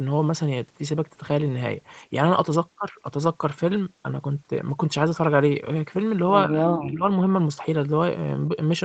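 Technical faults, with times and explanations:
6.47 to 7.05 s, speech suppressed in double talk: The speech level drops sharply, by about 25 dB at its deepest. Across about half a second it is turned down. Another talker is likely speaking over this stretch. The echo canceller then cannot tell the near talker from its own loudspeaker echo, so it turns both down. The sound stays limited to 8 kHz here, as it does across the call path.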